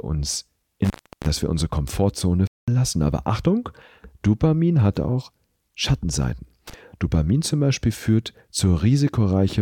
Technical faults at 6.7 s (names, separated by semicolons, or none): intermittent contact